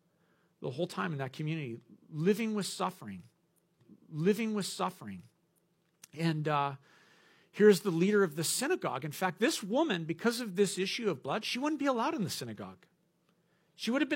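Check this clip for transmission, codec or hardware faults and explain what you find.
One transmission fault is present. From 3.77 to 5.76 s, after "community living with suffering", a small blip jumps back and about 2.0 s of speech replays before "and uh". This is a stream segment repeated: the player fetched or queued the same segment twice.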